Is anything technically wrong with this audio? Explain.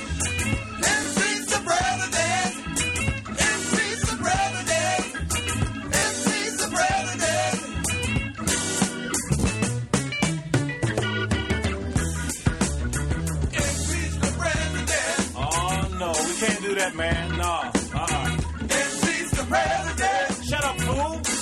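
Yes. At 1.04–1.08 s, 5.99–6.04 s and 9.41–9.44 s the sound catches in a brief buzzing repeat and then jumps ahead. This is Bluetooth stutter. Late or lost packets made the receiver replay its last buffer, skipping 15 ms, 30 ms and 15 ms of audio.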